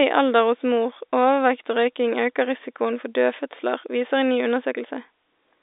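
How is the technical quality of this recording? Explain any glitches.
No glitches: the speech comes over an ordinary G.711 telephone channel, limited to the 300 Hz to 3.7 kHz line band, and nothing interrupts or damages the signal.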